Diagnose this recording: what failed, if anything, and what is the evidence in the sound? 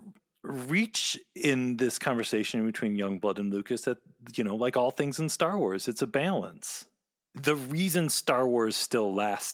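Nothing failed: no stage in the chain, from capture through to playback, leaves an audible fault anywhere in this speech recording.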